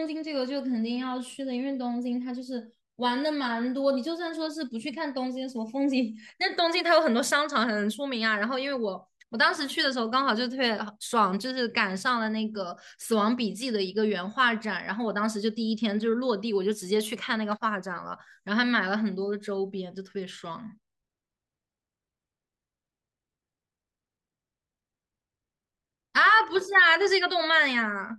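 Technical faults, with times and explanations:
No technical faults can be heard in this speech clip.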